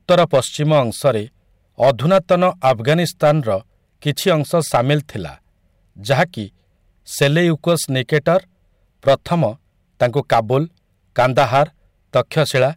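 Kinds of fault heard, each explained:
Hard clipping: the speech is driven about 8 dB past what the signal path can carry, so every peak that exceeds that limit is sheared flat instead of following its natural curve. Only a small share of the samples, around one or two percent, hit that ceiling, but it happens across the whole clip. The squared-off tops generate high harmonics, heard as a gritty crackle riding on each loud syllable throughout.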